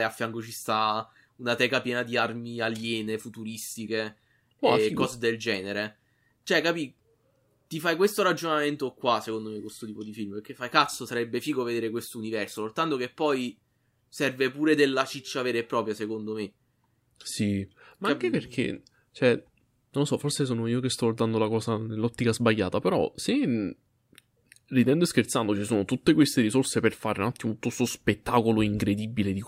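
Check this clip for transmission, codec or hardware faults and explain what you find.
No transmission, codec or hardware faults.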